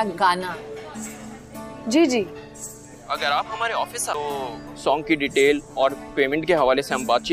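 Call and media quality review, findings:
CD skip at 4.14 s. Brief tick, then playback resumes from a different point on the disc. Short mute, under 10 ms. Probable component: disc transport and tracking servo. Mechanism: a knock or a disc flaw throws the laser onto another turn of the spiral track. The player mutes the output while it relocks. It then continues from the new position, displaced by a whole number of disc turns. The result is an abrupt jump in the sound rather than a fade.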